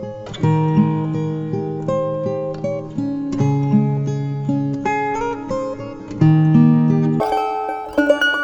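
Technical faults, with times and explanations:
7.20–8.44 s, wrong sample rate: the final stretch of sound suddenly runs about 2.76 times too fast and jumps roughly 17.6 semitones higher, which fits 16 kHz material being played back at 44.1 kHz with no conversion. Speed and pitch rise by exactly the same ratio. That lockstep is what separates it from a pitch shift, which keeps timing intact, or a time-stretch, which keeps pitch, so the result sounds high, squeaky and hurried.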